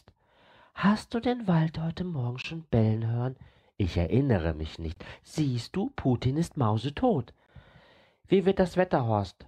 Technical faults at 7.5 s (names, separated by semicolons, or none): gap between chunks